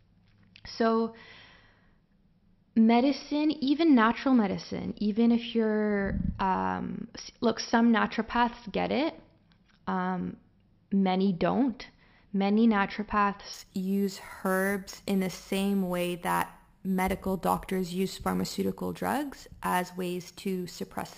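From 13.54 s to the end at 21.18 s, imaging from sample-and-hold upsampling appears. Each sample was repeated without smoothing, which fits a 12 kHz source. Mirror copies fill 6 to 12 kHz, about 18 dB down. They sound like metallic fizz tracking the speech.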